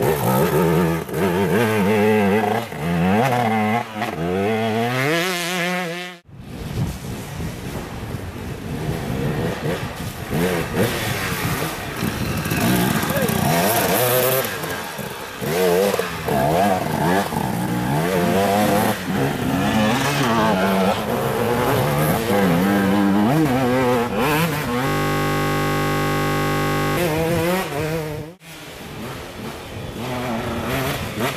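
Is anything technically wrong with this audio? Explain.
Yes. From 24.87 s to 26.97 s there is a system hang loop. The machine or its audio driver appears to have stalled while the sound hardware kept replaying the same ring buffer, which points to a 20 ms buffer. That one 20 ms slice repeats about a hundred times, so the sound gives way to a steady buzz at the 50 Hz loop rate for about 2.1 s.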